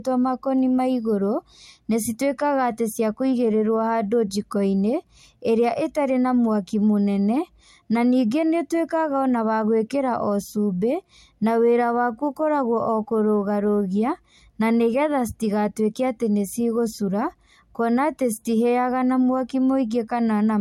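From start to finish, the speech has nothing above 16.6 kHz and carries the dulled, swirly detail of a heavily compressed encoding. The likely cause is low-bitrate audio saved at a high bitrate: the sound points to an MP3 first made at around 64 kbit/s and later re-encoded far higher, which cannot restore what was discarded. A spectrogram shows a flat ceiling at 16.6 kHz, with patchy, smeared energy just beneath it.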